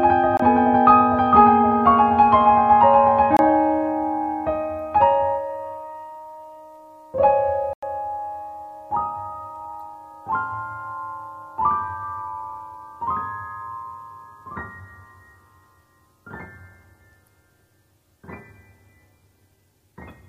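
Short holes appear at 0.37 s and 3.37 s (about 23 ms, fitting a 1024-sample buffer) and 7.73 s (93 ms): blocks of digital silence, where output buffers likely went unfilled.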